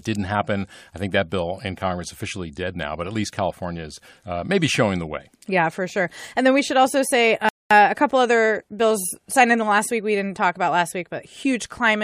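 At 7.49 s, right after "we should also say", the speech just stops dead and sits in silence until 7.71 s, then picks up with "a couple other bills" exactly where it left off. That's a rebuffering stall: the player ran through its downloaded audio and had to wait for more to arrive. Nothing gets skipped, but the pause adds about 0.22 s to the clip, and the gap lands mid-phrase with no natural reason to be there.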